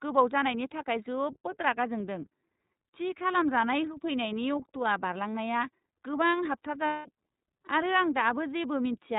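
Throughout the speech, the iLBC codec is plainly audible: a slightly rough, synthetic narrowband quality, consistent with its 30 ms frame mode at 13.33 kbps. Each frame's excitation is coded independently, and a spectrogram shows nothing above 4 kHz, a hard, flat ceiling across the whole clip.

From 6.87 to 7.08 s, lost iLBC frames leave a gap of roughly 0.2 s, which fits six missing 30 ms frames. The decoder fills it by repeating the last pitch cycle mixed with noise and fading it. This sounds like a held, buzzy vowel, then the voice is right again almost at once. On the waveform, this appears as a regular repeating cycle with a decaying envelope, and on the spectrogram as flat, smeared harmonics.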